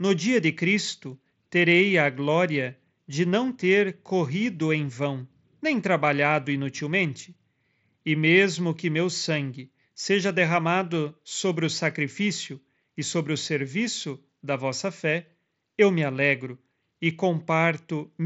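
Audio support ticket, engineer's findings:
No faults found in this speech recording.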